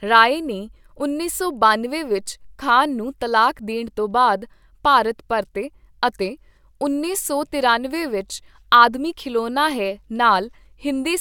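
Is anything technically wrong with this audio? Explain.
No, nothing technically wrong is audible anywhere in this speech recording.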